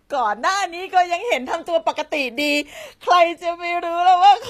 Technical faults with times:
0.00-4.50 HE-AAC compression

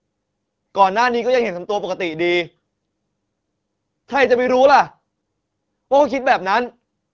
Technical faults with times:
none

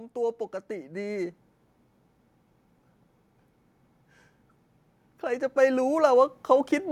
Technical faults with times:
0.13-1.40 automatic gain rising
5.04-6.78 automatic gain rising

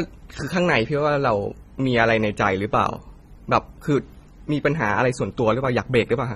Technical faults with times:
0.00-6.36 AAC compression

